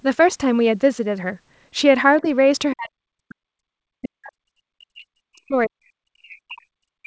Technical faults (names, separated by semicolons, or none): speech suppressed in double talk; other side's voice leaking through